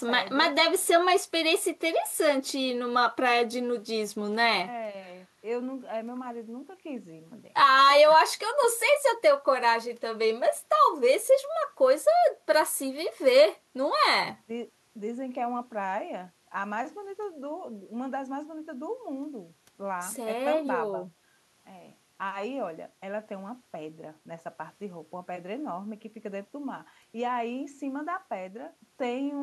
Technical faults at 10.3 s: none

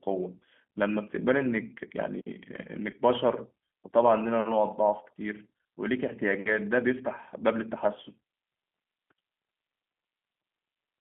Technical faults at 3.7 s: G.729 codec

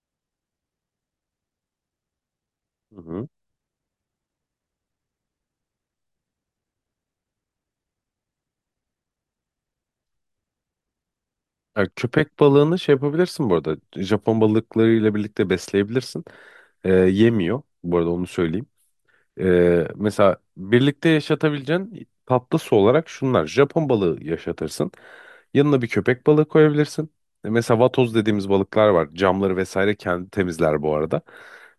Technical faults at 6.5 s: none

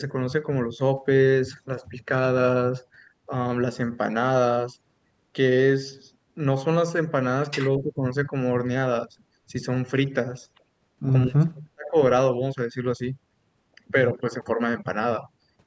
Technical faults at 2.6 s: none

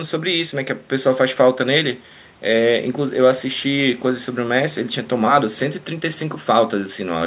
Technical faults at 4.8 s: none

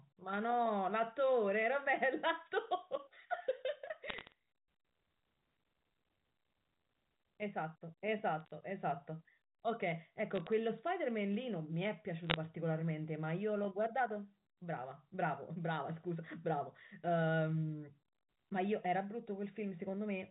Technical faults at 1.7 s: none

